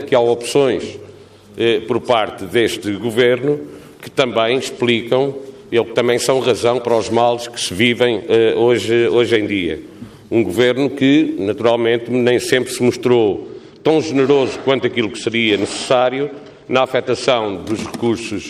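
From 13.28 to 17.55 s, channel delay (comb filtering): one channel lags by about two samples, so the mono sum notches near 10 kHz, dulling the top end.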